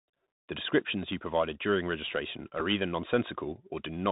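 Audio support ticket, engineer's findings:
Dull, boxed-in speech throughout, nothing above 4 kHz, scratchy s sounds, granular hiss under the voice, loud high-pitched sounds breaking up. Bluetooth CVSD headset codec: one-bit adaptive-step coding that fits a 64 kbit/s link; step lags fast transients.

Small tick at 2.60 s, no buzz. Bluetooth headset packet repeated: about 3.8 ms of audio lost between headset and phone, gap filled by re-decoding the previous packet's bits. Fits one repeated packet; good packets resumed immediately.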